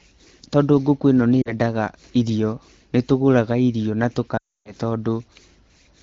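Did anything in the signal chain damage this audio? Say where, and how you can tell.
Yes. The damage occurs on the radio link ahead of the AMR wideband (HD Voice) decoder, as lost AMR speech frames. At 1.42 s, after "tondũ ngũkũ ĩno nĩ", a brief dropout lasts about 0.11 s, which fits two dropped 20 ms frames. At 4.37 s, after "nĩ tũgũraga irio na", a gap of nearly 0.37 s drops to near silence within two frames. The decoder replayed its last good pitch and vocal-tract parameters while ramping gain down, and wideband concealment mutes quickly.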